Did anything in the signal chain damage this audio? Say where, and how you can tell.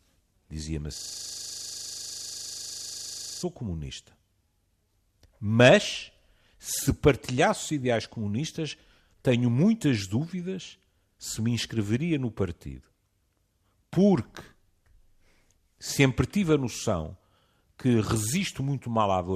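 Yes: a system hang loop at the driver or buffer stage. The hardware replayed one 40 ms buffer from 0.97 to 3.43 s, giving a steady 25 Hz buzz.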